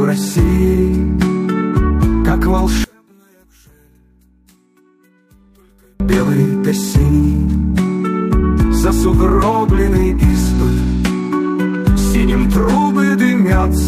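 From 2.84 to 6.0 s the sound drops by about 36 dB to a faint residue, likely one channel inverted, cancelling shared content when summed to mono.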